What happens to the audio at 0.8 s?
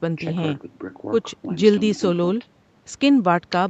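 Nothing goes wrong at 0.8 s: the speech carries on intact through that moment.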